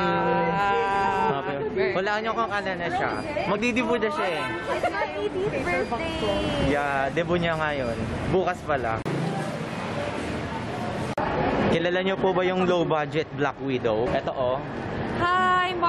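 At 3.57 s and 14.27 to 14.29 s, compressed frames are skipped: the sound jumps ahead about 20 ms, consistent with one 23.2 ms frame lost.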